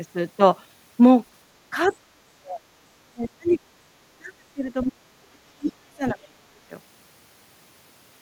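A speech recording in which the talker's voice sinks by roughly 30 to 40 dB in pieces within 1.71–2.66 s, 3.04–3.6 s, 4.16–5.1 s and 5.58–6.54 s. This is speech suppressed in double talk, likely an echo canceller pulling down the talker while the far end also spoke. The talker's own voice dips or cuts out in pieces here. The other side's voice leaking through is the opposite: a faint foreign voice appears, at about 35 dB below the speech at 1.84–1.96 s and about 20 dB below it at 3.50–3.54 s. That is likely residual loudspeaker echo left in the microphone signal.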